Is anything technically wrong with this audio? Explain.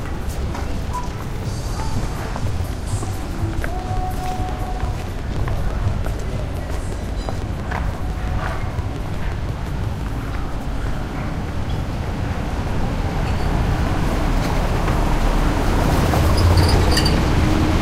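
Yes. From 3.62 to 10.02 s there is a train of clicks: around forty regular ticks at 5.8 per second, peaking about 5 dB above the sound, likely from electrical interference.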